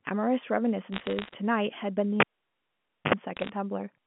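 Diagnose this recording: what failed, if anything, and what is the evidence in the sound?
Bit errors on a digital phone line appear from 0.92 to 1.34 s and again from 3.37 to 3.49 s as sharp crackling ticks over the telephone-band speech. On the digital line, flipped bits in the G.711 A-law stream corrupt single samples, at an error rate of roughly one percent or less.

A cable pulled and plugged in, in the analogue wiring, runs from 2.20 to 3.14 s. A pop opens about 0.89 s of near silence. A 66 ms burst of 50 Hz mains buzz follows as the plug tip makes partial contact, and a second pop marks the restored connection.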